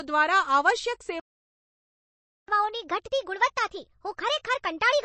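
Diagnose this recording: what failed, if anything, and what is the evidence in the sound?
The codec stage is the likely culprit: a low-bitrate MP3 encode, which fits something around 32 kbps. Starved of bits, the encoder zeroes weaker frequency lines that then flicker on and off between frames, and it has removed everything above 8.3 kHz. The damage is plainly audible across the whole speech clip as a watery, swirling texture, dull treble, and metallic chirps on sibilants.

At the buffer or playback stage, the player stopped delivering audio from 1.20 s to 2.48 s. The output goes silent for about 1.28 s in mid-flow. That is most likely a playback stall, where the player ran dry of data or its thread was blocked and nothing reached the output until it recovered. Sound then resumes from 2.48 s.

The player then resamples its backlog to catch up. This catch-up at higher speed runs from 2.48 s to the end of the clip at 1.25 times normal speed, so the speech plays noticeably fast and roughly four semitones high. 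Because speed and pitch rise together, the evidence points to plain resampling rather than time-stretching. Over the remaining 2.56 s this wins back only part of the lost time.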